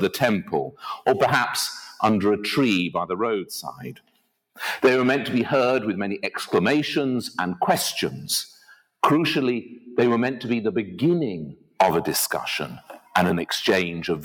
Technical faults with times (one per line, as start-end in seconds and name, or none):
0.00-14.24 noise suppressor applied to music or sounds
0.71-1.07 sound cut by the noise suppressor
1.87-2.02 sound cut by the noise suppressor
3.68-4.32 sound cut by the noise suppressor
8.53-9.02 sound cut by the noise suppressor
11.54-11.79 sound cut by the noise suppressor
12.75-13.14 sound cut by the noise suppressor